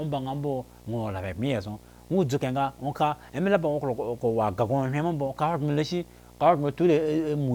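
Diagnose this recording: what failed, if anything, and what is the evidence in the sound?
Video or display buzz runs under the speech for the whole recording, a failure at the analogue wiring stage. A screen or video cable is coupling its picture signal into the audio path, producing a buzz at the 60 Hz field rate with a fizzy hash above it, sitting roughly 25 dB below the speech. On a spectrogram it shows as a steady 60 Hz line with a ladder of harmonics and broadband hash. The waveform carries a constant 60 Hz ripple, visible even in pauses.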